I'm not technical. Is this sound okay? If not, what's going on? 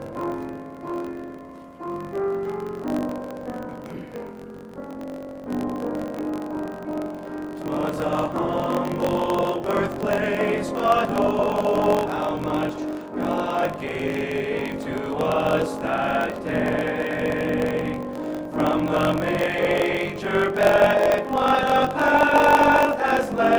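No. Throughout the clip there is a block size mismatch (truncated). One part of the playback chain hands over chunks of audio that are too long, and the next part keeps only the first portion of each, which fits a 1024-sample chunk, and discards the rest. The result is a low buzz at about 47 Hz and sound running about 1.12 times too fast. Unlike a recording simply played fast, the timbre stays normal.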